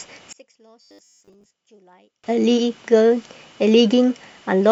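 From 0.33 s to 2.24 s the speech drops by about 34 dB and turns faint. This points to one channel inverted. One stereo side has likely had its polarity flipped, so the shared centre content cancels when the channels are summed to mono.

From 0.82 s to 1.51 s, inside that dip, the speech becomes a rigid metallic buzz at 100 Hz. This is robotic sound from repeated short buffers. Audio likely arrived too slowly, so a 10 ms chunk was replayed over and over. Most of the real signal was skipped.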